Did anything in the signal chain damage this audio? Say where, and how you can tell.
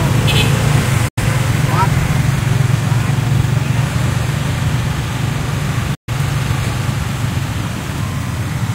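Yes: digital broadcast dropout, at 1.08 to 1.22 s and again at 5.94 to 6.10 s. This happens at the reception stage, where the receiver lost the digital stream or rejected corrupted frames and muted. Each time, the sound fades out over about 8 ms into silence, then resumes further along with the missing material gone. The gaps of 85 ms and 128 ms fit two and three lost frames of about 43 ms each.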